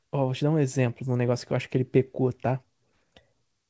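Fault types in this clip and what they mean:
No faults are present; the speech comes through a call path that is working normally, with nothing above 8 kHz, which fits a wideband G.722 codec running at 64 kbps.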